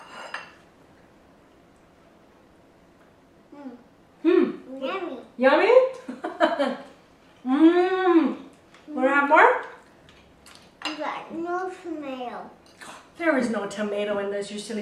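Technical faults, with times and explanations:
No technical faults can be heard anywhere in this clip.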